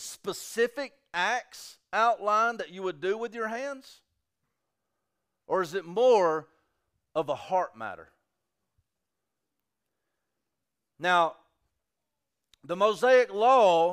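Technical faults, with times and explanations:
No technical faults can be heard anywhere in the speech recording. There is nothing to list with a time or an explanation.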